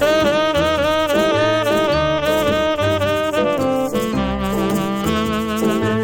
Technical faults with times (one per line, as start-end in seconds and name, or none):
none